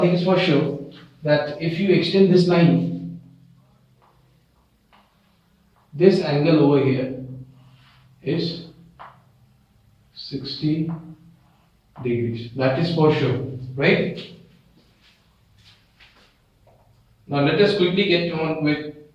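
No technical faults can be heard anywhere in the clip. The audio runs without any dropout, glitch or interruption.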